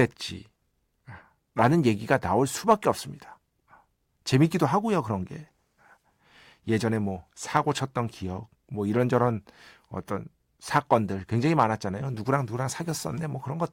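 No audible faults turn up anywhere in the recording: no dropouts, clicks, distortion or timing disturbances at any point.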